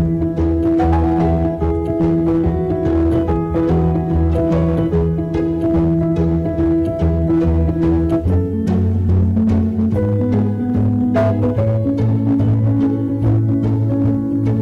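Hard clipping runs throughout: the signal is driven about 9 dB past full scale, flattening the peaks of roughly a tenth of the samples into harsh fuzz.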